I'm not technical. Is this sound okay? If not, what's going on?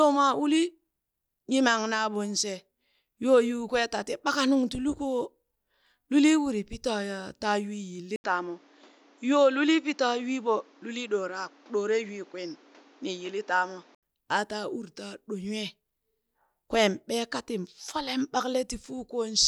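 No. Input switched to a poorer device, 8.16–14.03 s: after a brief gap, the speech turns duller with faint background noise, likely from another microphone or a headset taking over.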